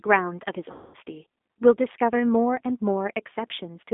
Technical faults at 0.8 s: G.729 codec; VoIP packet loss concealed by the speech codec

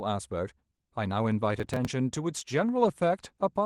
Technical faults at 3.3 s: call bitrate drop

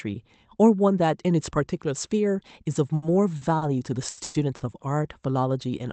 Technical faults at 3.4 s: short stall from a late packet

